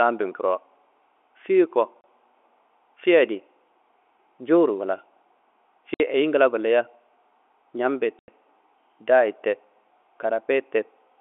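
Dropouts at 2.01 s (30 ms), 5.94 s (60 ms) and 8.19 s (90 ms) are packet loss filled with silence. Missing packets were replaced by hard-edged gaps, which fits 30 ms packets.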